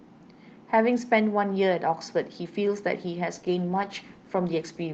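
At 3.34 s the speech undergoes a call bitrate drop, with the Opus encoder falling from 32 to 15 kbps and sitting at that floor for about 1.3 s through the end. Coarser coding makes the voice rougher and more watery than the 8 kHz-bandwidth call audio before it.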